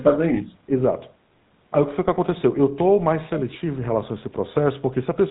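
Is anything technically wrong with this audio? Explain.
Yes, there are two problems.

The whole clip carries the sound of the GSM full-rate codec, and the damage is plainly audible. Nothing comes through above 4 kHz, and the voice has that buzzy, gravelly grit. The codec rebuilds speech from a vocal-tract model driven by a coarse pulse train, keeping only a fraction of the excitation detail. That thin, rasping character fits the old 13 kbps GSM full-rate codec.

From 3.39 to 3.56 s there's a brief, faint repeat of the voice, roughly 20 dB under the main speech, arriving about 418 ms late. That's likely an echo leak: someone on a loudspeaker, with their echo canceller letting a bit of the far end's own audio slip back into their microphone and down the line. It shows up here as just a short scrap of delayed copy.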